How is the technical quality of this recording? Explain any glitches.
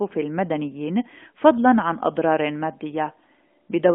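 No glitches turn up in this speech recording: it carries the band-limited character of a narrowband AMR mobile link at 12.2 kbps, confined to roughly 250 Hz to 3.4 kHz with only light coding coloration, and nothing departs from how such a line is meant to sound.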